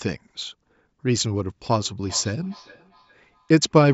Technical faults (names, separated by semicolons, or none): feedback echo between two devices